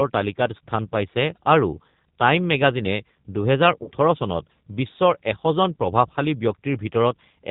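Throughout, the speech carries the sound of the G.729 codec, and the damage is plainly audible. The codec rebuilds the speech from a vocal tract filter, a pitch predictor and a few pulses per sub-frame, which fits an 8 kbit/s stream. Everything above 4 kHz is gone, and the speech has a rough, slightly synthetic grain. Ordinary low-pass filtering would dull the sound but leave it smooth, so this graininess marks a model-based speech coder.

From 3.84 to 3.89 s there is VoIP packet loss concealed by the speech codec. About 30 ms of audio went missing, which points to a single lost packet. The decoder filled the gap by extending its last pitch and filter settings at falling gain, so the speech briefly smears into a buzzy tone or a coloured noise that fades. Because each frame builds on the one before, the sound stays weak or distorted a little past the gap. A dropout or splice would instead give silence or a click.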